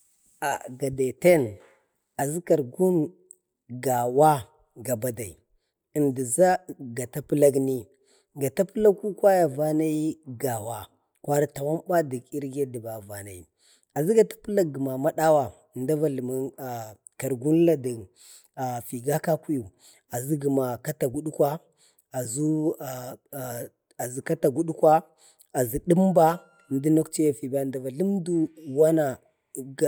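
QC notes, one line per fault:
No faults found on this speech clip.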